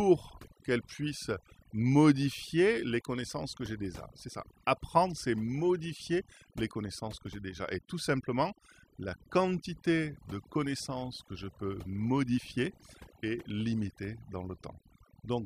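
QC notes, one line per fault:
Throughout, overdone noise removal: the denoiser's been pushed way too hard on this speech, so any frequency band sitting close to its noise estimate gets pulled right down or switched off. Quieter bits of the voice fall under that threshold and vanish along with the noise. That's why the background in the gaps drops away and breaks up into little twinkly specks popping in and out.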